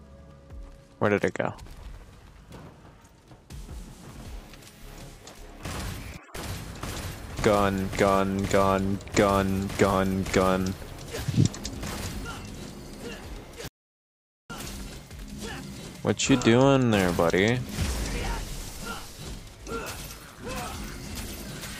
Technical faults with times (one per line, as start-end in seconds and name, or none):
13.68-14.50 audio dropout to silence